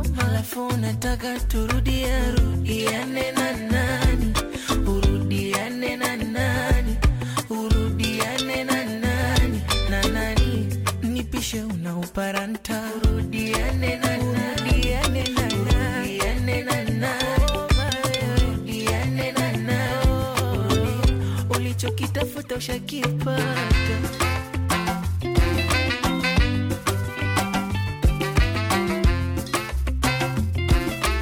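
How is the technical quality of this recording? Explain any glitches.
Nothing stood out on listening; no glitches were heard anywhere in the recording.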